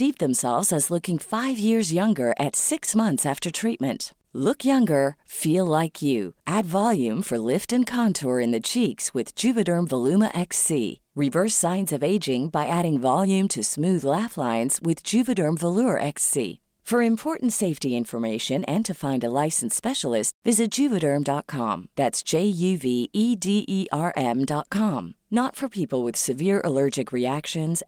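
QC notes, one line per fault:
No faults to log on this speech recording. Nothing here calls for a timed entry.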